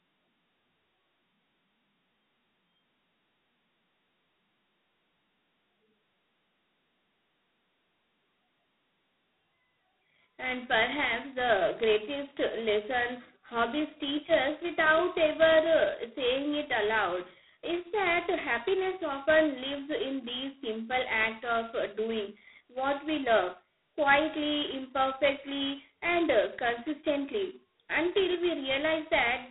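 A harsh, rasping hiss rides on the speech from start to finish, swelling on louder syllables and sinking as the level drops, so the noise seems welded to the voice rather than sitting behind it. The sound is also boxed into a narrow telephone band of roughly 200 Hz to 3.5 kHz, with nothing at all above 3.9 kHz. This is heavy G.726 ADPCM damage, and the coarseness fits the 16 kbit/s rate, where each sample's difference from the codec's running prediction gets only a couple of bits.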